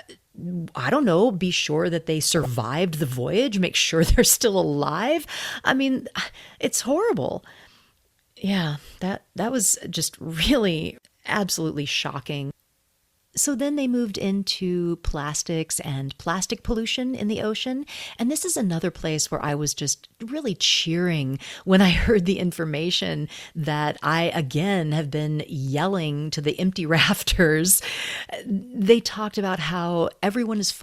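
DAB burbling at 2.37–2.46 s, after "be sure that they", and 19.40–19.49 s, after "is another place where": residual bit errors corrupt MP2 sub-band levels across a few frames, giving brief bursts of burbling.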